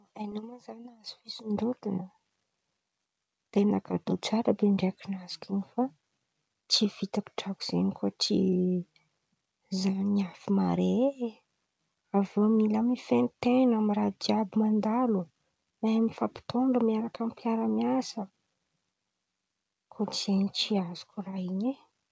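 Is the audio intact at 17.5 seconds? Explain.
Yes, the speech is intact at 17.5 seconds, carried through the G.722 call path with its normal band limit, nothing audible above 8 kHz.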